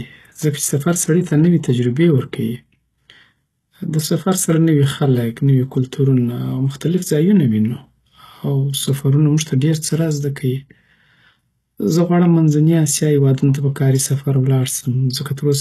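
The whole speech track carries plainly audible codec damage, likely HE-AAC compression at a bitrate in the region of 16 kbps. The treble is rebuilt from lower bands, so s sounds come out gritty and lispy, and nothing survives above about 12.3 kHz.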